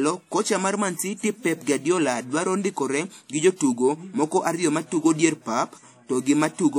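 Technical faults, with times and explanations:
Throughout, WMA compression: the speech carries plainly audible transform-codec damage, a smeared, washy quality with ringing and a hiss that rises and falls with the voice. The likely cause is a lossy WMA encode whose quantisation noise spreads across each long transform block instead of staying tied to the signal. The damage level fits a bitrate near 48 kbps, and the spectrum stops sharply at 18.9 kHz.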